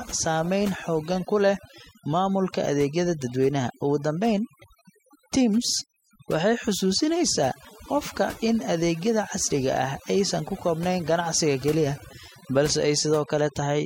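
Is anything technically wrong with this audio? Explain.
Yes. Throughout this speech clip, overdone noise removal is at work: a noise reduction stage set too aggressively cuts individual frequency bands whenever they sit near its noise estimate, taking quieter parts of the voice with them. The background drops and breaks up into twinkling specks.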